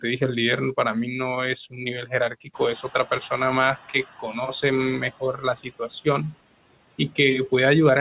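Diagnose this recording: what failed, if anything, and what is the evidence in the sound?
Throughout, the background noise dips between phrases and swells under the speech. These are noise suppressor artifacts from call processing, cutting steady noise by about 16 dB.

Syllables sound swallowed at 1.70–1.86, 2.02–2.13, 2.29–2.60 and 5.11–6.06 s, dropping by about 14 to 16 dB. This is speech cut by the noise suppressor, which mistook quiet speech for noise.

The room noise jumps about 17 dB near 2.5 s and comes through with less reduction at first, then settles by 4.09 s. This is the noise suppressor catching up: its noise estimate took 1.56 s to adapt, reaching about 9 dB of reduction.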